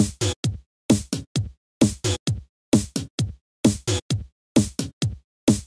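Nothing is technically wrong with the audio in this clip.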